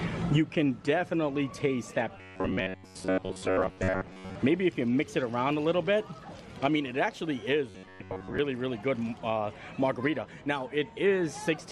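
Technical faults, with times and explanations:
2.18–4.35 s and 7.69–8.39 s, robotic sound from repeated short buffers: a rigid metallic buzz near 93.8 Hz. Most audio is skipped, likely as a 10.7 ms fragment loops.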